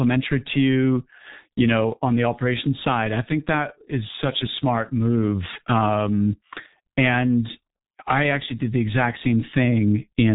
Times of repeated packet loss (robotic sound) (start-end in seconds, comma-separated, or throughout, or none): none